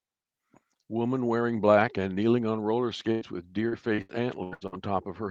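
At 3.11 to 3.23 s, a burst of packet loss: about 100 ms vanishes, bridged by a single fading continuation of the last sound before the audio resumes further on. From 3.69 to 4.74 s, repeated packet loss gives a robotic sound: six short holes, the longest 87 ms, patch about a third of the stretch into choppy fragments.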